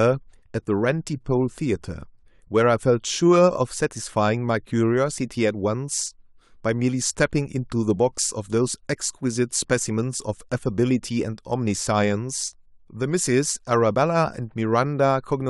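Nothing technically wrong turns up anywhere in this bit of speech, so there's no problem to time or trace back to a cause.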